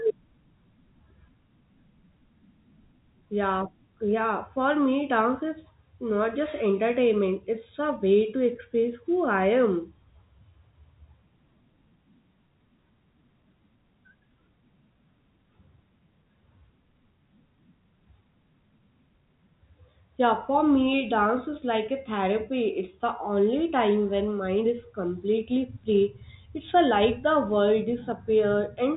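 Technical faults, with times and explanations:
No technical faults detected.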